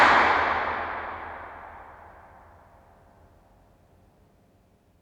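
No technical faults are audible anywhere in this recording.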